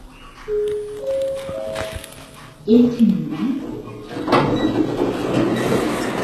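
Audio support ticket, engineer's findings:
HE-AAC compression, whole clip: treble above 12.3 kHz absent, upper band gritty and metallic, likely HE-AAC at very low bitrate rebuilding highs by copying lower bands upward.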